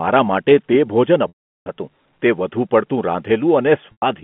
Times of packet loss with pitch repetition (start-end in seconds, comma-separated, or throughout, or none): 1.28-1.66, 3.92-4.02